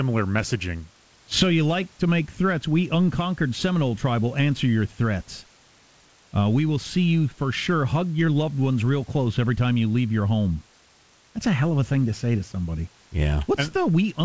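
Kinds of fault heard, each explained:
No faults can be heard in this speech clip. The call path limits the audio to nothing above about 8 kHz, which fits a wideband codec such as G.722, and faint room noise sits about 34 dB below the speech.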